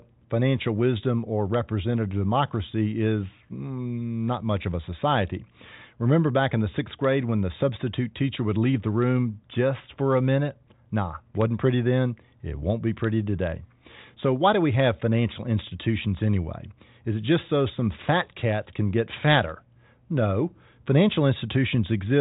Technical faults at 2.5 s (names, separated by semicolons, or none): none